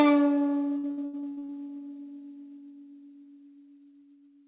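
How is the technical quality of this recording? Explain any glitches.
The music is band-limited throughout, with nothing above 4 kHz, which fits a G.711 mu-law call path at 64 kbps. There is one clear glitch.

From 0.78 to 1.54 s there is repeated packet loss, giving a choppy, robotic stutter. About ten holes open in quick succession, the longest about 84 ms. Each is patched by stretching the last good sound forward. More than half of that stretch, around 56%, is concealed rather than real audio, so fragments of the music drop out between the smeared fills.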